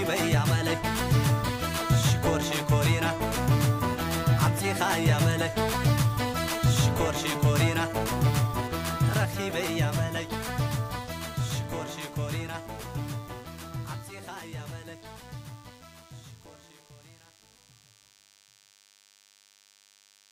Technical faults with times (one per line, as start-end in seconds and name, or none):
0.00-20.32 DECT cordless phone buzz